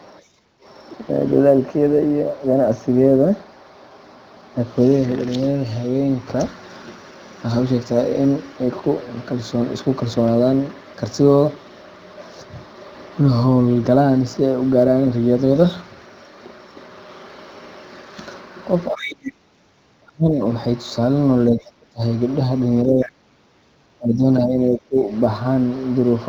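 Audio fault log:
throughout: sample clock jitter. A faint hiss-like roughness rides on the speech, strongest on loud passages and sibilant, high-frequency sounds, and disappearing in the pauses. An unsteady converter clock, wobbling by a couple of microseconds, places each sample slightly off time, and the error scales with how steeply the waveform is moving. It sits about 45 dB below the signal. On a spectrogram this appears as a diffuse noise floor that brightens under speech energy up to the wideband 7.6 kHz ceiling and goes dark in the gaps. The waveform looks unchanged to the eye.
0.22–0.62 s and 23.64–23.70 s: background gated by the echo canceller. The room tone under the talker ducks abruptly by about 15 dB, over roughly 0.4 s in the first case and a brief 70 ms dip in the second, then comes back. The canceller clamped the microphone path hard while the loudspeaker was active and then released it. 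A spectrogram shows a vertical band where the low-level noise floor thins out across all frequencies, and the waveform's background trace narrows and then widens again.
18.91–20.39 s and 21.5–25.1 s: speech suppressed in double talk. The talker's speech sinks and breaks up in fragments, losing up to about 30 dB in the first span and about 20 dB in the second, over roughly a second and a second and a half in total. This is likely because both ends spoke at once and the canceller, unable to tell near speech from loudspeaker echo, attenuated everything. The waveform shows speech envelopes collapsing in chunks, and the spectrogram shows harmonics and upper formants fading or being chopped out in blocks.
18.96–19.32 s, 21.38–21.44 s and 23.02–23.09 s: other side's voice leaking through. A second voice pokes through in short scraps. It is strongest in the first span, about 15 dB under the talker, and weaker in the later two, around 20 to 35 dB down. 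Residual loudspeaker echo the canceller failed to remove is the likely cause. On a spectrogram the leak appears as a faint, separate harmonic pattern overlapping or filling gaps in the main speech. In the waveform it shows as small, ragged bursts.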